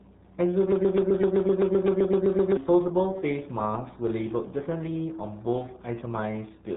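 From start to finish the speech carries the signature of the RealAudio 14.4 codec, the RealAudio 1 format built for dial-up modems. At 8 kbit/s there are too few bits to describe the signal, and the damage is heavy. The band stops at about 3.9 kHz, so consonants lose their edge and the voice sounds muffled. What remains has a gargly, watery texture, because the coarse coding smears each sound.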